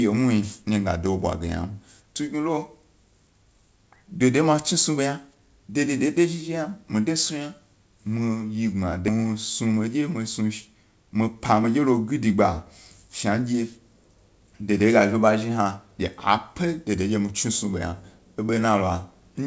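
A speech recording carried over a call link, where the G.722-style coding at what sounds like 64 kbps leaves nothing above 8 kHz, has two kinds of fault. At 9.08 s a stretch of audio was dropped while later audio was already waiting, producing a skip ahead. Roughly 0.7 s of speech simply vanishes, with no filler or silence, so the talker jumps forward mid-flow and the two sides butt together abruptly. The buffer then still held more audio than its target, so it ran a jitter buffer speed-up, repeatedly cutting out pitch-period-sized slices to shed delay. This happened from 9.66 to 10.02 s at 114%, from 10.96 to 12.34 s at 109%, and from 13.09 to 13.62 s at 107%, removing a few tenths of a second in total. The speech keeps its pitch but sounds rushed in those stretches.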